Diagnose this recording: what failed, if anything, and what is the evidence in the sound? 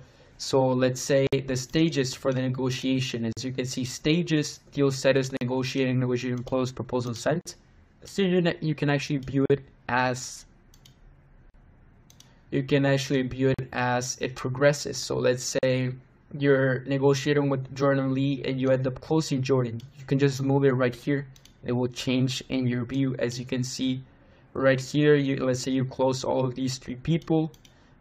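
Gaps at joins of encoded pieces open at 1.27 s (56 ms), then 3.33, 5.37, 7.41, 9.46, 11.50, 13.54 and 15.59 s (43 ms each), about every 2 s. At the codec stage, each separately encoded piece kept its start delay and last-frame padding, leaving silences with smeared edges.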